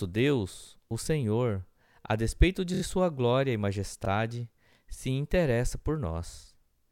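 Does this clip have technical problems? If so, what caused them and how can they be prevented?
Yes. Repeated frames cause stutters at 2.73–2.81 s, after "a despeito de", and at 4.04–4.07 s, after "de sua glória e". One 26 ms compressed block replays three extra times, then once. Prevent this by checking frame sequence numbers during writing or streaming.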